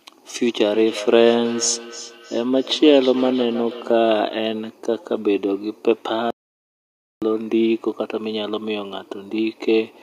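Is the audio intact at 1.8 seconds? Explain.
No, 1.8 s falls inside a feedback echo between two devices, running 0.72 to 4.01 s. A second device replays the microphone, which gets picked up again, so the speech repeats roughly every 0.3 s at about 14 dB down.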